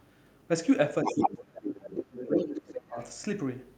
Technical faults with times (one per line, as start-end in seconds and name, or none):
1.04-1.14 other side's voice leaking through
1.13-2.97 speech suppressed in double talk
2.99-3.07 other side's voice leaking through